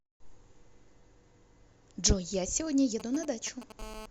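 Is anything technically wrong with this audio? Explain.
Yes. Two kinds of mobile-phone interference get into this speech recording near the end.

GSM signalling bursts run from 3.00 to 3.72 s. A nearby 2G phone sends short groups of radio pulses, as it does before a call or text. The audio circuit rectifies them. They sound like galloping ticks and brief 217 Hz buzzes, roughly 15 dB below the speech.

GSM phone buzz follows from 3.79 to 4.06 s. Now the phone transmits continuously at 217 bursts per second, which points to an active call. The rectified pulses give a hard, raspy buzz, rich in harmonics, about 12 dB below the speech.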